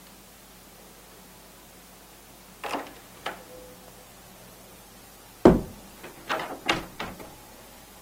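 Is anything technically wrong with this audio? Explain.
Yes. From 4.07 s to the end of the clip, the sound turns rough, watery or muffled, with the high frequencies trimmed away, and it does not clear before the clip stops. This is a call bitrate drop. The call's bandwidth estimate fell, and the encoder was pushed from 96 kbps down to 18 kbps, holding that lowest rate for about 3.3 s. At so few bits, Opus codes the sound more coarsely and narrows its bandwidth.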